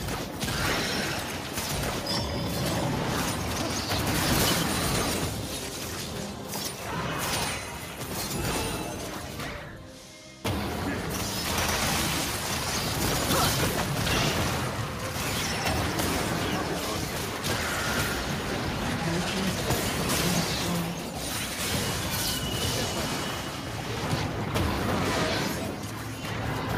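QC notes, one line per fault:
Nothing here needs flagging; the audio sounds fine all the way through.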